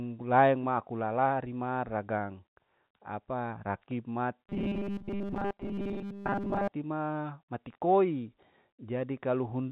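From 4.49 s to 6.72 s, between "apa rakib" and "ma mati koi", the speech turns into a rigid, metallic buzz pinned at 200 Hz, still loosely tracing the syllables. This is robotic sound from repeated short buffers, likely caused by audio arriving too seldom, so the player keeps looping a 5 ms slice (one over 200 Hz) while most of the real signal in that stretch is skipped. The telephone-band G.711 coding, audible as nothing above about 4 kHz, sits underneath throughout.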